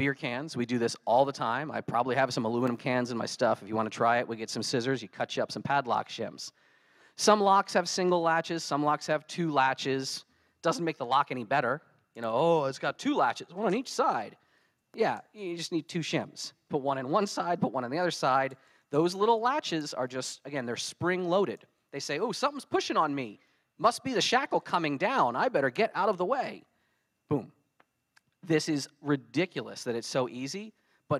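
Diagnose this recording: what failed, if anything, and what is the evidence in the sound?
No fault can be heard.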